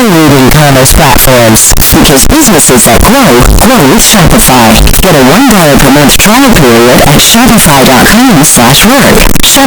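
From start to finish, the 16-bit samples have likely been read with signed and unsigned mixed up, so the top bit of every sample is flipped. Each time the speech waveform crosses zero, the value leaps from one extreme of the range to the other. The result is very loud, harsh distortion across the whole recording, and the quiet gaps between phrases come out just as loud as the speech itself.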